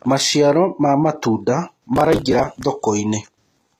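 The whole clip has a plainly audible smeared, metallic treble, with s sounds turning gritty and lispy and nothing at all above 14.9 kHz. This is most likely HE-AAC compression at a low bitrate, with the damage pointing to something near 20 kbps. The codec spends its few bits on the lower spectrum and invents the top by copying lower bands upward under a coarse envelope, so the rebuilt harmonics fail to line up with the real ones below.

From 1.96 s to 2.65 s, a rough burst of crackle tears through the speech, a dense gritty rasp that stops as abruptly as it began. This is processor overload crackle. The audio engine was running very short buffers of around 5 ms and missed its deadline dozens of times over that stretch. Each missed buffer was skipped outright, leaving a tiny gap with hard edges, and the rapid chain of those gaps fuses into the tearing sound.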